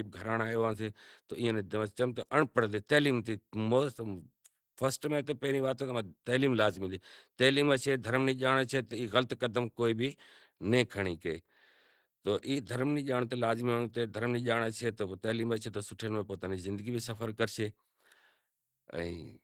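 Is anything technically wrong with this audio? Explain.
Yes. Opus compression runs throughout: the speech sounds hoarse and grainy, with a rough, noisy texture, though content still reaches about 20.2 kHz. This likely comes from Opus hybrid mode near 16 kbps, where starved bands get filled with folded or noise-like energy.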